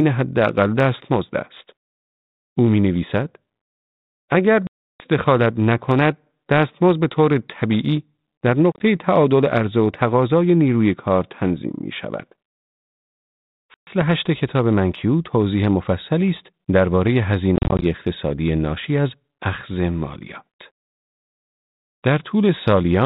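Speech over a G.726 ADPCM link with packet loss: hard silent gaps at 4.67–5.05, 8.72–8.82, 13.74–14.03 and 17.56–17.85 s, each followed by briefly, slightly distorted speech while the decoder's predictor resynchronises.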